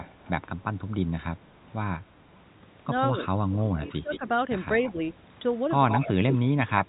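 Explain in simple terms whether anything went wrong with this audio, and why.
Yes, two things go wrong in this speech. The first is echo leak: a delayed copy of the voice trails behind it. It happens from 0.0 to 0.3 s, lagging by about 0.21 s, and again at 3.6 to 4.19 s, 4.84 to 4.92 s, and 5.89 s to the end, lagging by about 0.16 s. The last stretch is loudest, almost as strong as the voice. Unlike room reverberation, which blurs sound smoothly, this is a distinct repeat arriving a fixed moment later, most likely from a loudspeaker on the far end that its echo canceller didn't fully remove.

The second is speech suppressed in double talk. From 3.82 to 4.25 s, right where that echo overlaps, the voice sinks sharply, for about 0.4 s in total. The cause is likely the echo canceller hearing both sides at once, failing to separate them, and turning everything down. Unlike a network dropout, the sound isn't cut cleanly to silence. 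It dips and recovers, and only while the other side is active.

Underneath, the ordinary telephone coding can be heard as a narrow sound with nothing above about 3.8 kHz.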